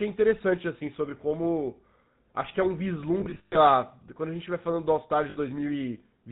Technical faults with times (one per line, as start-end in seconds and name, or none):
0.00-6.32 GSM full-rate codec
3.20-3.56 lost GSM frames
5.30-5.38 lost GSM frames